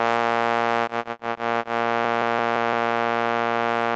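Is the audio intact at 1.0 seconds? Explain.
No. At 1.0 seconds the music sits inside a stretch of repeated packet loss (robotic sound) running from 0.83 to 1.66 s. Five holes open in that span, the longest 80 ms, and together they cover about 240 ms. Each hole is patched by stretching the last received sound forward. The next gap follows soon after. Nearly a third of the stretch is concealed this way, so the music turns choppy, with pieces missing.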